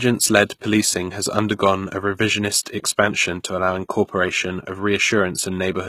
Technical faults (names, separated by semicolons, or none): HE-AAC compression